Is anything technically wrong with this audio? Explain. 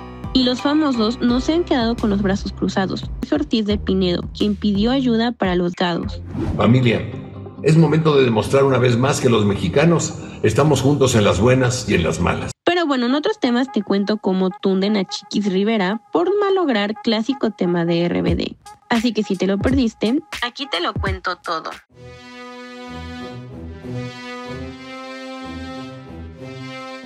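Yes, there's damaged data in a compressed stream, showing up twice, at about 3.23 s and again at 5.74 s. In both spots a chunk of the encoded data has been corrupted, so the decoder can't read those frames properly, loses its place and has to hunt for the next valid frame header before carrying on. What you hear is a short chirp or squawk, a quick blip in the sound.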